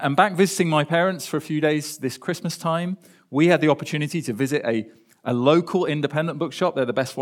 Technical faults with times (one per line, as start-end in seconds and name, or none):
none